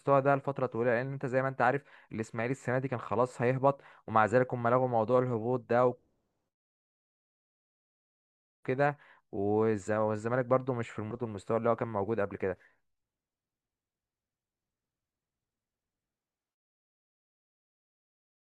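No technical faults are audible.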